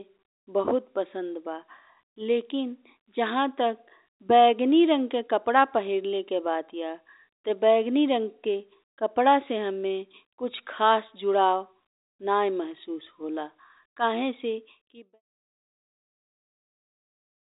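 Nothing here counts as a fault: the speech sits in an ordinary telephone band that stops a little below 4 kHz, and the level eases out in a smooth fade from roughly 14.5 s to 15.22 s.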